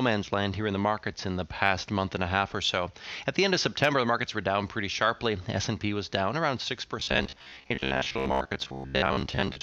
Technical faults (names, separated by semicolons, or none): robotic sound from repeated short buffers